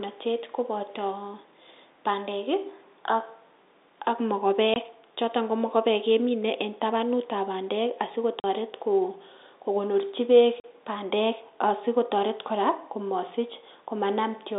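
Packet loss filled with silence cuts the speech three times: 4.74 to 4.76 s (20 ms), 8.40 to 8.44 s and 10.60 to 10.64 s (40 ms each). The gaps fit dropped 20 ms packets. Each hole has hard edges against the narrow telephone band.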